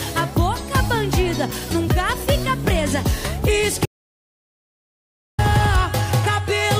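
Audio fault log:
3.86–5.39 s: audio dropout to silence. The sound cuts off mid-flow and returns about 1.53 s later, with the gap silent and no room tone. The input was likely lost, with silence written in its place. Whatever occurred then is gone.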